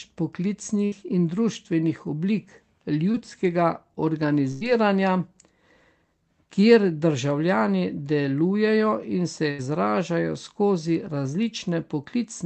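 At 0.85 to 0.94 s, a burst of packet loss drops about 60 ms of the speech. The receiver extends the last sound for 63 ms while fading it, so a held buzz or hiss covers the gap and the talk resumes slightly further on. At 3.12 to 3.16 s, a short concealed packet loss leaves a 20 ms hole, patched with 18 ms of continued sound that blends back in as a brief smear. Two more bursts follow. At 4.52 to 4.63 s, 80 ms is lost under 92 ms of fading fill. At 9.51 to 9.60 s, 80 ms is lost under 77 ms of fill. Each is heard as a fading, held sound and then a jump ahead.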